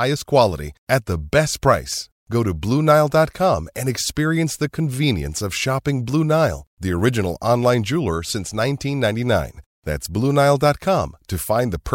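No technical faults can be heard anywhere in the recording. At no point does anything break into or disturb the speech.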